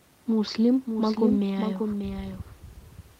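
From the start to the end of the speech, a doubled audio track runs under the original: a second, full-band copy trails it by about half a second and sits around 5 dB lower, with no decay or room colour. The likely cause is the signal being captured twice, once through a slower path. On a waveform each syllable burst reappears, smaller, half a second later; a spectrogram shows every pattern repeated at that fixed offset, above the faint room noise.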